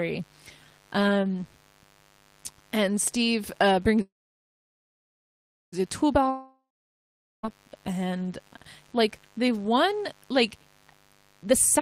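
A steady, raspy mains buzz sits under the speech for the whole clip, about 35 dB below the signal. Sharp switching spikes at twice the 50 Hz mains rate show on a spectrogram as evenly spaced horizontal harmonic lines reaching several kilohertz.

From 4.01 s to 5.74 s there is a call audio freeze. The last sound trails off as a fading buzz or hiss, then about 1.62 s of near-silence appears as a flat waveform before the speech resumes where it stopped. The likely cause is delayed packets emptying the jitter buffer, which adds 1.71 s of delay but loses nothing.

A long network dropout runs from 6.29 s to 7.46 s. A brief decaying fill gives way to about 0.81 s of flat, empty waveform and a blank spectrogram. When the sound returns, about 1.14 s is gone, most likely because packets never arrived.

From 11.42 s to the end at 11.81 s, a jitter buffer speed-up plays the audio at 140% speed while the pitch stays the same. 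Repeated removal of pitch-period slices, about 150 ms in total, makes the speech sound hurried and packs the spectrogram features closer together in time.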